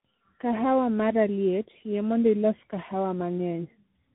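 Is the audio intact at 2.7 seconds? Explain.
No, the speech at 2.7 s is degraded by tandem speech coding, which runs through the whole clip. The sound has the layered roughness of a narrowband speech codec such as AMR-NB re-encoded by a CVSD stage, with nothing above 3.9 kHz. The result is muffled, gritty and warbly.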